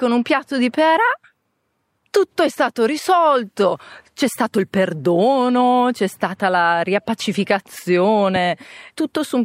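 A single sharp pop cuts through the speech from 8.36 to 8.39 s, peaking a few decibels above it while the talking carries on underneath. This loud pop was likely a sudden voltage pulse, from a plug, switch, static discharge or driver glitch, entering the signal path.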